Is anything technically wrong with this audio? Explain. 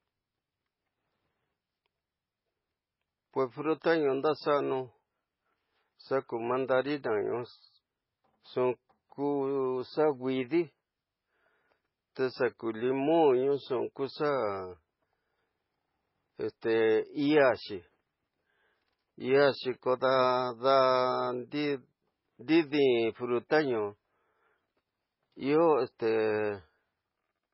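Yes. Throughout the speech the sound is dull and watery, with nothing above 5.5 kHz, swirling, chirpy s sounds and smeared consonant attacks. This is likely heavy MP3 compression, which fits a very low bitrate near 16 kbps, where the encoder cuts the treble and lets weak frequency components flicker between frames.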